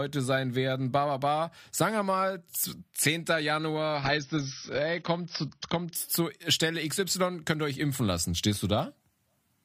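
Speech, switching abruptly between 3.95 and 5.95 s to an adaptive stream at a lower bitrate, as the connection slowed. Nothing above 6.6 kHz, heavier codec artefacts, suggesting roughly 24 kbit/s AAC, with no gap.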